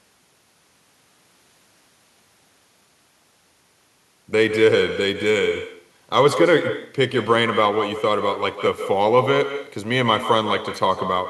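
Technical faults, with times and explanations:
Throughout, echo with no canceller: the far end's loudspeaker leaks into its mic, so every phrase returns roughly 150 ms later, about 9 dB down and thinner.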